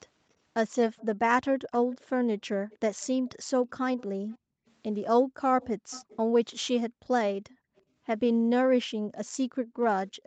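From 0.97 to 4.7 s there's an echo leak, a faint copy of the speech trailing by about 324 ms, roughly 25 dB down, likely a far-end speakerphone's echo canceller letting some through. It recurs at 5.62 to 6.17 s (331 ms, stronger), briefly at 7.76 to 7.82 s, and from 9.15 s to the end (341 ms). The background gated by the echo canceller dips by about 33 dB between 4.38 and 5.36 s, and by about 40 dB between 8.95 and 9.8 s, for about 0.4 s and 0.5 s respectively, as the canceller clamps the mic hard.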